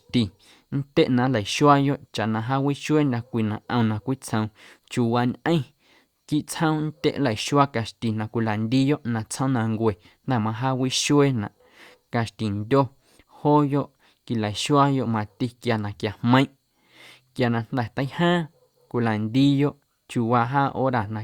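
Nothing goes wrong anywhere in this speech recording, so there are no technical faults to walk through.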